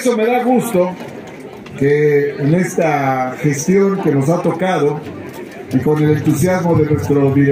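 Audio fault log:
Nothing stood out on listening.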